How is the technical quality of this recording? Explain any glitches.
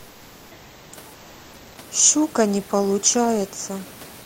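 The background is replaced by comfort noise in two pauses: from 0.00 to 0.91 s and from 1.13 to 1.77 s. In those gaps the room noise, sitting about 27 dB below the speech, gives way to a steady, featureless hiss about 1 to 2 dB quieter. The likely cause is discontinuous transmission, which fits Opus DTX: the sender goes quiet without speech and the receiver synthesises filler. A spectrogram shows smooth, uniform bands there, and the waveform shows an even, flat envelope.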